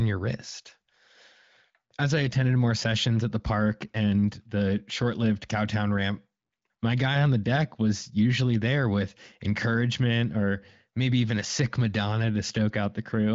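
Speech over HD Voice wideband, with no technical faults.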